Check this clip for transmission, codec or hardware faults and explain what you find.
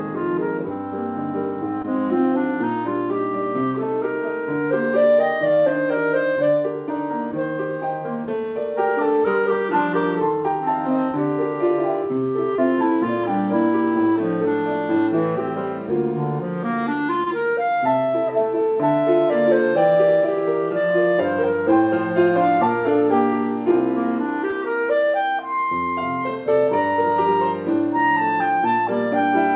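Four brief dropouts are audible, all short concealed packet loss. They fall at 1.82–1.86 s, 12.56–12.60 s, 17.24–17.28 s and 24.50–24.54 s. Each time, about 20 ms of audio failed to reach the decoder in time. The receiver covered the gap by extending the preceding sound for roughly 17 to 23 ms, then crossfaded back into the real signal. Each one is heard as a quick smear or wobble. The call path's narrow band, with nothing above 4 kHz, points to G.711 A-law.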